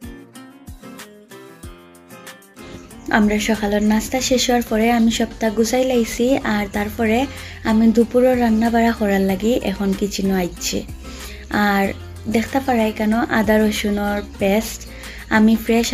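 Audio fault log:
Nothing to log here, as no faults turn up anywhere in this one.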